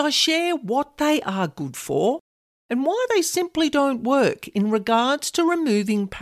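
Nothing in the recording stood out as a technical fault on listening.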